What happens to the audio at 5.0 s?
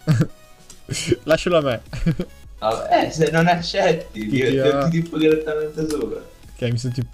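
At 5.0 s the audio sits inside a run of periodic USB or driver dropouts lasting from 0.12 to 7.02 s. Every 0.1 s a stalled bus or driver loses a fraction of a millisecond, filled with silence. This produces evenly spaced ticks, heard only while sound plays, unlike irregular random clicks.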